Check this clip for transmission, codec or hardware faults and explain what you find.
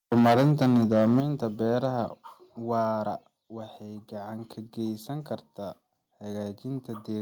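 Two hardware-side faults are present in this speech: microphone overload at the start, and a series of microphone volume steps.

From 0.12 to 1.2 s the speech shows microphone overload. The input was driven about 11 dB beyond the converter's ceiling, so the tops of the waveform are flattened, roughly a tenth of the samples in that stretch. The squared-off peaks add odd harmonics, heard as a harsh, crackling edge on the loudest syllables. The likely cause is an input gain set far too high for this talker.

Microphone volume stepped down four times: at 0.19 s by about 2 dB, at 1.2 s by about 8 dB, at 2.22 s by about 3 dB just before "waara waxay gacan ka", and at 3.24 s by about 2 dB just before "waxay gacan ka". Each is an abrupt drop in speech and background together, with no fade. The largest comes exactly as the overload ends, which fits automatic gain control likely reacting to the clipping by cutting the device's input level in discrete steps.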